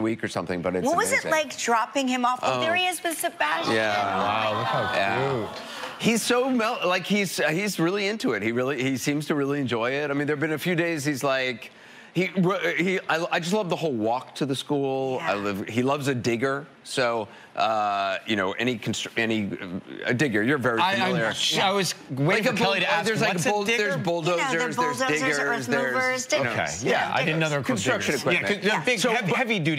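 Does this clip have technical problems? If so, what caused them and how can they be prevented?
No, nothing in the recording points to a technical fault, so there is no cause to trace and nothing to prevent.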